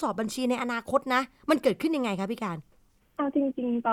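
Speech recording, no audible faults.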